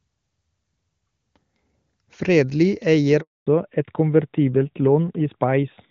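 At 3.21 s a handover gap begins: no speech frames arrive while the call switches networks, so the sound cuts to silence for 260 ms until 3.47 s. From 3.47 s to the end the call shows a fallback to narrowband, leaving the clear HD Voice wideband sound for a narrowband codec with nothing above 4 kHz, which makes the speech duller and rougher.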